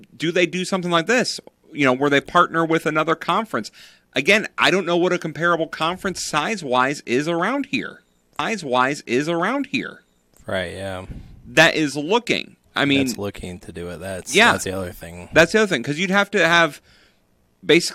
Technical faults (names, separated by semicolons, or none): stream segment repeated